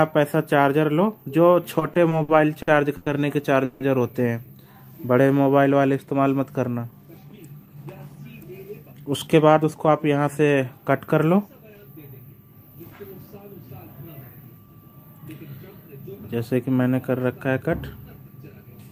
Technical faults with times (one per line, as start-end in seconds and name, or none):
1.79-3.08 repeated stalls (stutter)
3.64-3.82 call audio freeze
4.73-5.52 jitter buffer slow-down
7.49-9.88 jitter buffer speed-up